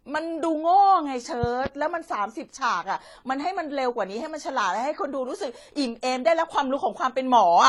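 Passed most likely through two lossy codecs in succession, this speech recording carries transcoding between lossy codecs throughout. The artefacts point to an AAC-LC encode at around 32 kbit/s, then re-encoding as HE-AAC at a similar rate. The second encoder spends bits reproducing the first one's smearing and adds its own spectral-replication texture, and the lowest bandwidth limit in the chain persists. The result is speech with both sets of artefacts layered together. Between 1.43 and 1.68 s a loud pop appears, heard as two sharp clicks in quick succession, roughly 10 dB above the speech, which continues underneath. Its likely cause is a sudden voltage step or pulse entering the signal path, such as from a plug, switch or static discharge, which the downstream circuitry shapes into a brief thump.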